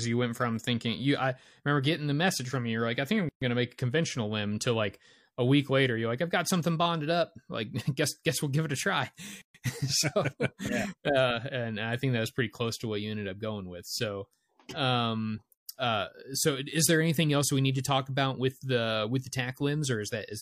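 Gaps at a join of encoded pieces open at 3.29–3.42 s (after "like I think I'm"), 9.42–9.55 s (after "give it a try") and 15.55–15.68 s (before "uh so is there"), each about 130 ms. Speech resumes exactly where it stopped, unlike a dropout, which loses material. The 6 s spacing shows separately encoded segments joined with their start delay and end padding left in.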